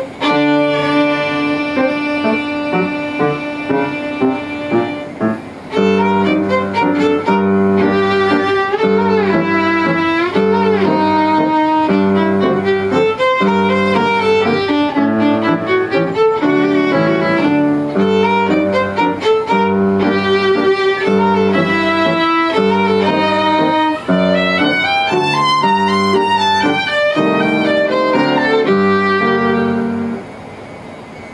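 No technical faults can be heard anywhere in the recording, and the signal holds steady and continuous throughout.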